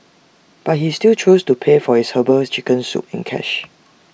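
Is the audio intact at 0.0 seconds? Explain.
Yes, the audio is intact at 0.0 seconds, with no fault audible at that moment.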